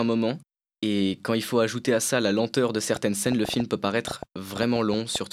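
Something in the chain, likely electrical interference from nearby equipment or a faulty connection or power supply, begins injecting repeated pulses just after "ça la lenteur de", producing a train of clicks from 2.96 s to 5.17 s. Some fifteen similar clicks arrive at about 6.4 per second but with uneven spacing, so they tick and pop irregularly over the speech and through its pauses, with peaks standing roughly 10 dB above the speech itself.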